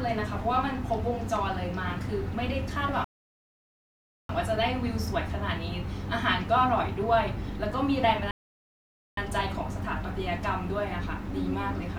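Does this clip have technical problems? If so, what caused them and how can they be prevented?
Yes. The speech halts in two rebuffering stalls, from 3.04 to 4.29 s (about 1.25 s of silence) and from 8.31 to 9.17 s (about 0.86 s). Each time the player ran out of downloaded audio and waited for more. Unlike a packet-loss dropout, which skips material, the speech resumes exactly where it stopped, so nothing is missing and the clip simply runs longer. A larger playback buffer or adaptive bitrate switching prevents these stalls.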